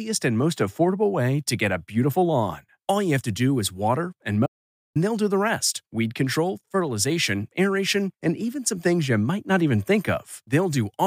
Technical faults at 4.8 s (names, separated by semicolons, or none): playback stall